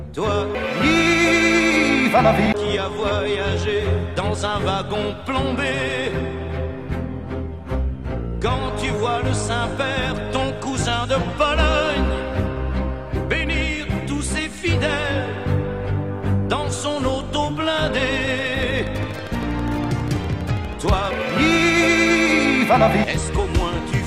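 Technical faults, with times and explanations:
18.15–22.11 s: train of clicks, about fifty evenly spaced pulses at 12.4 per second, peaking about 5 dB above the sound, likely from electrical interference.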